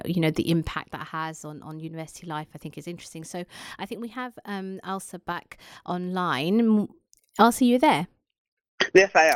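No technical faults can be heard anywhere in this speech recording, and the signal stays intact and continuous throughout.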